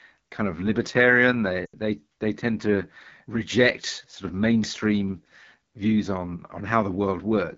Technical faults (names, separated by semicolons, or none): AMR wideband (HD Voice) codec; lost AMR speech frames